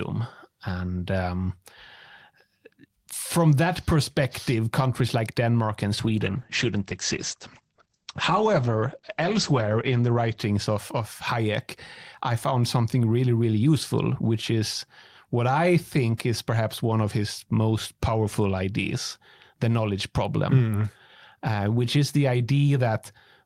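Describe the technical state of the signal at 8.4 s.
At 8.4 s the speech sits inside a call bitrate drop from 5.98 to 11.01 s. Encoding falls from 32 to 11 kbps, so it is coded more coarsely and band-limited from 20 kHz to 8 kHz. It sounds muffled and watery, and a spectrogram shows energy sharply cut off above 8 kHz.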